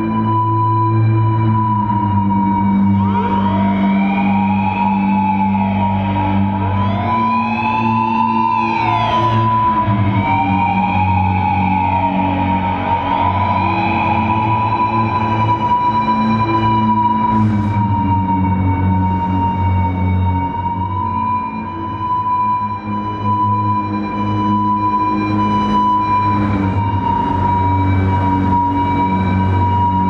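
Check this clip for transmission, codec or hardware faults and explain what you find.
No transmission, codec or hardware faults are audible here.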